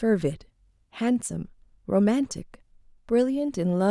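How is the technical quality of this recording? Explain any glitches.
Nothing stood out as a glitch or technical problem on listening to this speech recording.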